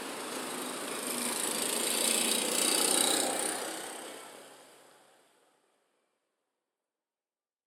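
No technical faults can be heard in this recording.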